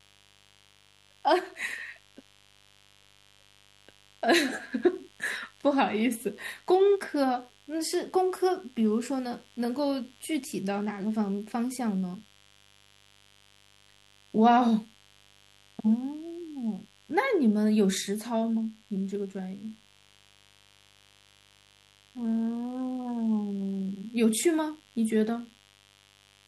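A steady, raspy buzz runs under the speech from start to finish, sitting well below it, roughly 35 dB down. This is mains buzz from the 50 Hz supply: sharp switching spikes twice per cycle leak in, spraying harmonics up into the kilohertz range.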